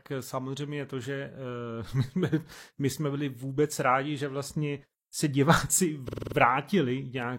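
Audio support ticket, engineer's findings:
Repeated frames at 6.04–6.33 s in the speech, just after "že vlastně se diváci". Symptom: stutter. The same 46.4 ms block loops, six extra plays. Clip lengthened by 278.6 ms. Probable component: encoder output or transport buffer. One compressed frame re-sent or rewritten, so the decoder replays it.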